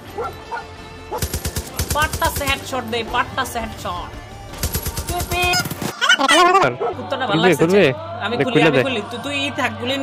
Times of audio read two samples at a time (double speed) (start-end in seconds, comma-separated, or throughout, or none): 5.53-6.63